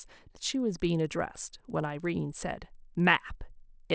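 Throughout, a resampler restarted on every block, likely converting 24 kHz to 16 kHz. Each 50 ms block edge errs, giving a 20 Hz buzz under the speech.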